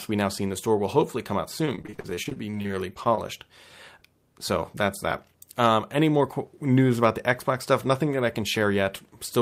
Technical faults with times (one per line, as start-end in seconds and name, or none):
1.65-3.19 repeated packet loss (robotic sound)